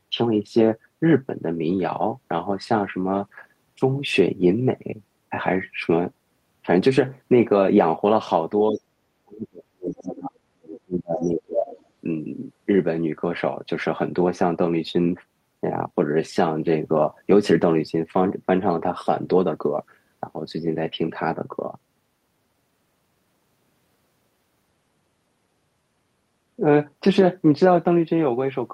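Around 8.71 to 8.79 s the talker's level dips briefly, by roughly 10 dB, and then from 9.24 to 11.67 s it's pulled down much harder, as deep as around 40 dB, with about two seconds of that stretch chopped or nearly gone. That's speech suppressed in double talk. The likely cause is both ends talking at once, so the echo canceller couldn't tell its own talker from the loudspeaker echo and clamped down on everything.

Right inside that, at 11.21 to 11.26 s, there's a faint scrap of another voice, roughly 30 dB under the talker. A longer, more noticeable piece follows from 11.67 to 11.85 s at around 20 dB down, just as the suppression lets go. Both are the other side's voice leaking through, most likely because the echo canceller left some of the far-end loudspeaker signal in the microphone feed.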